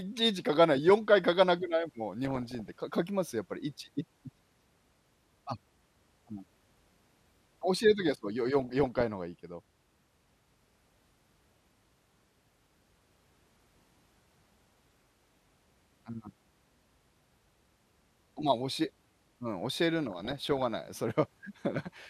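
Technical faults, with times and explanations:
2.25–2.79 s, 8.59–9.03 s, 11.67–12.23 s and 20.05–20.66 s: DAB burbling over the speech. Weak reception let bit errors, around 1% at worst, slip past error correction. Corrupted samples put short blips of noise in single sub-bands, and corrupted scale factors make sub-bands jump in level.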